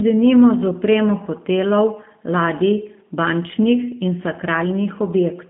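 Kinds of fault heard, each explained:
G.729 codec: The speech runs through the whole clip with nothing above about 3.5 kHz and a telephone band of roughly 150 Hz to 3.4 kHz. It is rebuilt from a vocal tract model, pitch prediction and a few coded pulses per frame, which fits an 8 kbit/s VoIP codec. The damage is plainly audible as a rough, slightly synthetic buzz on the voice. A plain low-pass filter would dull the sound without this roughness.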